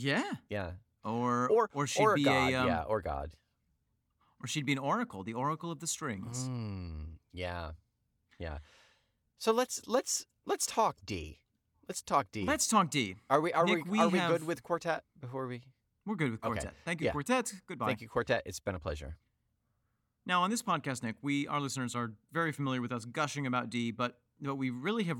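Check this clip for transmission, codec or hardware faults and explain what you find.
Nothing in the transmission, codec or hardware path stands out as faulty on listening.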